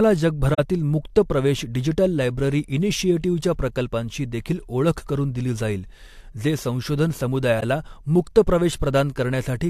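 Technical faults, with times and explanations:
0.54 to 0.59 s and 7.58 to 7.63 s, corrupt frame concealed: the speech is briefly disturbed for about 54 ms, once just before "मुक्त प्रवेश डिजिटल लायब्ररी" and once right after "दिली जाईल जे संशोधन". Corrupted bits in the AAC stream were caught by the decoder, which filled in the damaged stretch itself. A stretch that length fits two lost frames.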